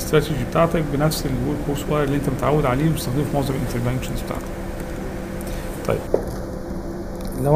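Channel delay (comb filtering) runs from 6.07 s to the end at 7.55 s. One channel lags the other by roughly a fifth of a millisecond, so summing to mono cancels shared content in evenly spaced notches starting near 3 kHz, leaving the sound hollow and phasey.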